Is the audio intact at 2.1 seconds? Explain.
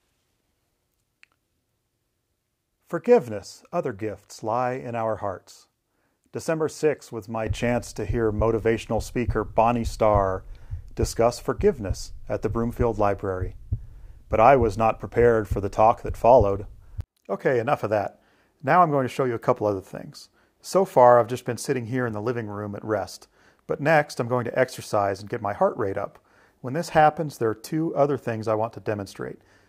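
Yes, the audio is intact at 2.1 seconds, with no dropout, click, distortion or other fault audible at that point.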